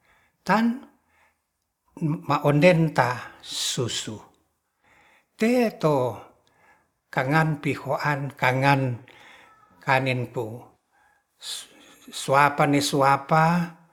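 Nothing in this recording of speech stands out as a technical problem; there's nothing to flag from beginning to end.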